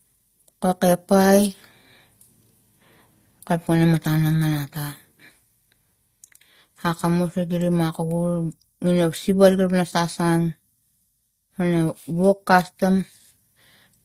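Speech, with a layered compression character that runs the full length of the clip and points to transcoding between lossy codecs, likely an HE-AAC stage at a low rate, around 24 kbit/s, followed by an Opus encode near 48 kbit/s. The second encoder spends its bits reproducing the first one's smearing and swishy high-band texture while adding its own artefacts, so both are heard together. Nothing is present above 15.7 kHz.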